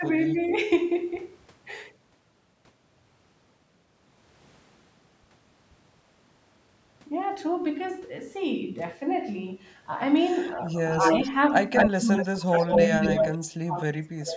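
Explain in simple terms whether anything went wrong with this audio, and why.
Speech suppressed in double talk is heard from 0.0 to 0.51 s, 11.2 to 11.39 s, 11.9 to 12.99 s and 13.46 to 14.37 s. The voice dips or cuts away, barely at 11.2 s and almost to silence at the end. The likely cause is both sides talking at once, so the call's echo canceller turned everything down.

Echo leak is heard at 0.39 to 0.57 s, 10.89 to 11.3 s and 11.74 to 13.38 s: a delayed copy of the voice, about a quarter of a second behind (257 ms first, then 224 ms). It is faint at first, then as loud as the speech and louder still by 11.74 s. This is likely a loudspeaker's sound reaching the microphone without the echo canceller fully removing it.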